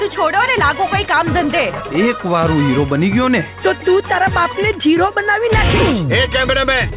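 Nothing is technically wrong here: the sound has come over a call path whose narrowband coding leaves nothing above 4 kHz, which fits G.711 mu-law at 64 kbps and is simply how that link sounds.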